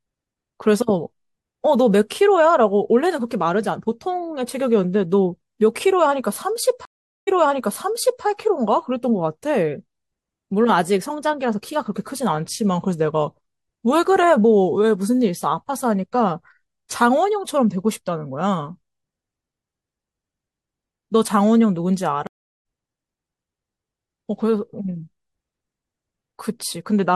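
Speech with two stream reconnects, where the connection dropped and a new decoder restarted mid-stream. At 6.85 s a 0.42 s gap is followed by audio about 0.98 s earlier, repeating material. At 22.27 s a 0.38 s gap skips about 0.4 s ahead. Both show as flat-line breaks in the waveform and blank columns on a spectrogram.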